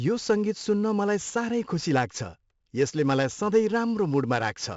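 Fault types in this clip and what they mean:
4-bit ADPCM compression: a heavy, gritty hiss rises and falls with the speech level throughout and roughens sharp onsets, and nothing is heard above 7.7 kHz. Each sample is coded as a coarse, adaptive 4-bit step from a prediction, and the dulled top fits 64 kbps at 16 kHz.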